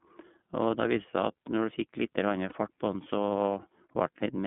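iLBC codec, throughout the whole speech clip: the audio is confined to a telephone band of roughly 150 Hz to 3.5 kHz, with nothing above it, and the codec damage is plainly audible as a rough, slightly synthetic grain on the voice. The band and texture point to iLBC's 13.33 kbps mode with 30 ms frames, where each frame's excitation is coded on its own rather than predicted from the previous one.

Lost iLBC frames, from 2.49 to 2.53 s: a gap of about 30 ms, the size of a single frame, was filled by the decoder's concealment, which repeats the last pitch cycle blended with noise. The result is a brief held, faintly buzzy vowel-like sound. Because the frames are independent, the voice recovers cleanly as soon as the next frame arrives.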